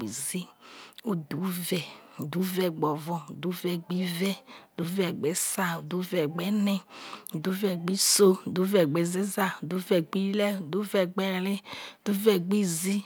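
No technical faults can be heard anywhere in this speech recording. There is nothing in it to mark with a time.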